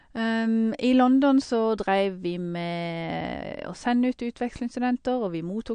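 MP3 compression damage runs through the whole recording: the speech has nothing above 9.5 kHz and a watery, swirling texture, with metallic chirps on s sounds. The likely cause is an encoder short of bits, which cut the treble and dropped weak frequency lines from frame to frame, consistent with a rate near 55 kbps.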